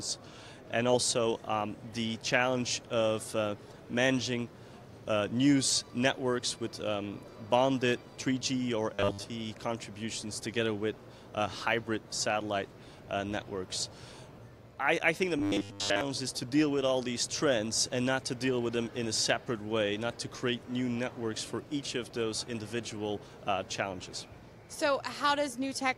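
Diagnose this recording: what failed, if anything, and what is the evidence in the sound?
The driver or buffer stage was likely starved of new audio, so the playback path kept re-sending its last short block instead of fresh samples. The result is robotic sound from repeated short buffers at 8.94 to 9.24 s and again at 15.39 to 16.01 s: a rigid, metallic buzz locked at 100 Hz, which fits a 10 ms block looping over and over, with most of the real audio in those spans skipped.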